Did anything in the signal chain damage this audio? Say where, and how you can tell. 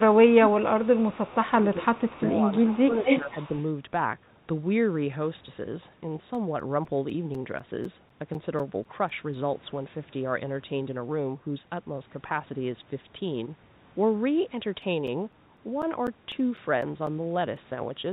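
Yes. The call processing did most of the damage in the first three and a half seconds. The sound dips from 0.03 to 1.16 s, by about 20 dB at worst, then by about 10 dB at 1.39–2.42, 2.61–3.05 and 3.21–3.35 s. That's likely speech suppressed in double talk: the echo canceller couldn't separate the talker from the far side and ducked both.

Overlapping that stretch there's an echo leak, a faint delayed copy about 359 ms behind at 0.50–0.63, 0.84–1.51 and 1.95–2.30 s, roughly 25–30 dB down. Then at 2.67–3.63 s a much stronger one, only about 5 dB down, arrives 252 ms late. Likely a speakerphone canceller letting residue through.

The playback from disc is a separate problem: CD scratch ticks. There are 14 short clicks from 6.35 to 9.59 s and 13 from 14.57 to 17.57 s, each up to about 10 ms, ticking roughly four times a second. An unrecoverable blemish came round once per revolution. The G.711 call path itself just band-limits everything to 4 kHz.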